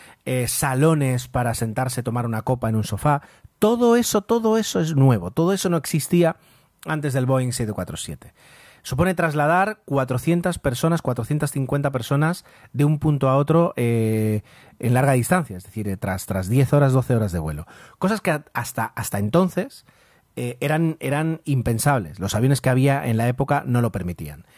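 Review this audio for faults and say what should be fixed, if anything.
Nothing here needs fixing: I listened to the whole thing and didn't hear any technical faults.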